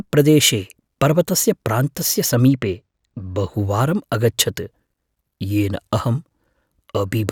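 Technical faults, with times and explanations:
2.48–3.54 s, channel delay (comb filtering): after "पर्वतस्य प्रान्तस्य", one channel lags, consistent with roughly two samples. Summed to mono, highs cancel around 10 kHz. The sound turns dull.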